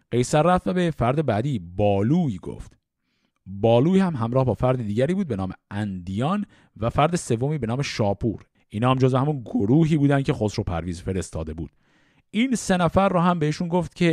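A short piece of recorded speech, and nothing technically wrong turns up anywhere in it, so there's no fault to point at.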